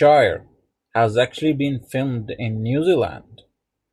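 No technical faults can be heard anywhere in this speech recording, with the signal holding steady and continuous throughout.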